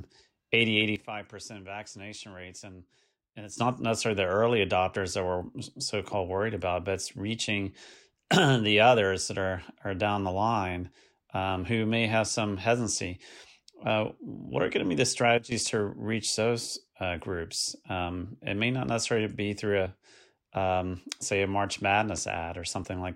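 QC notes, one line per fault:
0.96–3.58 s and 15.38–15.52 s, sudden gain jump: a digital level setting was likely switched without a ramp, so the sound and its background noise drop together by about 12 dB, then about 13 dB in the brief dip between "going to be the" and "to reach those uh".
1.98, 4.96, 7.94, 13.90, 16.88, 22.84 s, audio missing between chunks: a short piece, roughly 20 ms, was likely lost at chunk boundaries about 3 s apart, and the edges were butted together. Each is heard as a tiny skip, including after "about but it's reaching" and before "what are going to".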